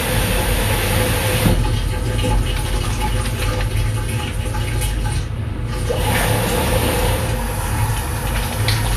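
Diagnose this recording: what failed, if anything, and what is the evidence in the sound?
The failure is at the codec stage. Throughout the sound, nothing is present above 14.2 kHz. This is likely low-bitrate audio saved at a high bitrate. A heavy first encode discarded detail, and re-saving it as high-rate MP3 cannot bring that detail back.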